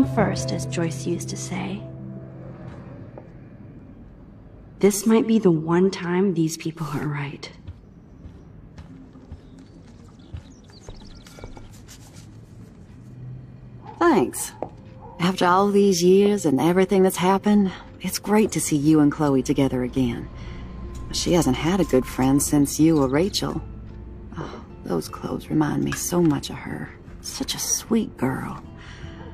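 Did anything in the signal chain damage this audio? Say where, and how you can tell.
No, no signal-chain damage heard.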